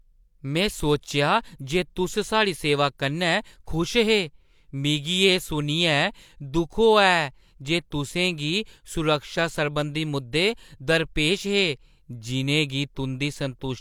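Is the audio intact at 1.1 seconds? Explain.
Yes, the speech at 1.1 seconds is intact, with no audible dropout, click, distortion or other fault at that moment.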